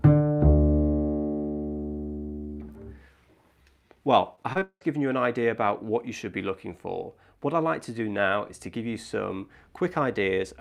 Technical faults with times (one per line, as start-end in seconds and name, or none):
4.35-4.83 repeated packet loss (robotic sound)